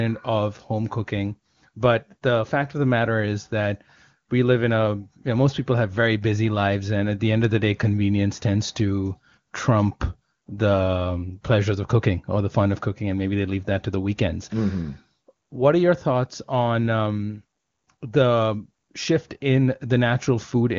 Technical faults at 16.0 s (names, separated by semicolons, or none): none